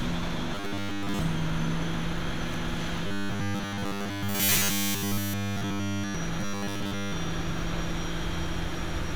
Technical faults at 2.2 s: none

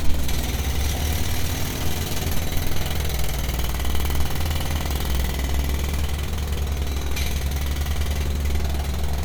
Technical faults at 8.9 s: none

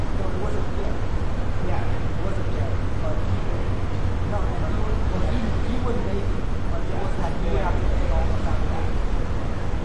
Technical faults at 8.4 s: MP2 compression

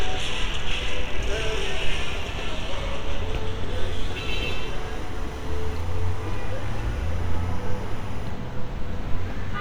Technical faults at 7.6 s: timecode bleed

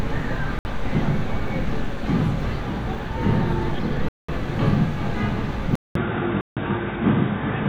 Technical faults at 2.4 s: none

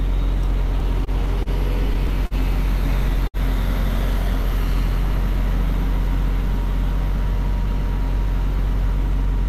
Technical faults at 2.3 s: short stall from a late packet

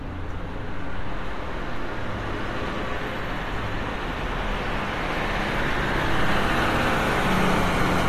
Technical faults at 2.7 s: AAC compression

